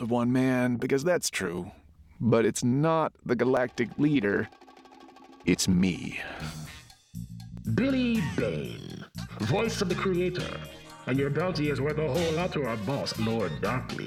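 From 1.58 s to 13.57 s there are periodic USB or driver dropouts every 2.0 s: about a millisecond is skipped each time, leaving a regular tick.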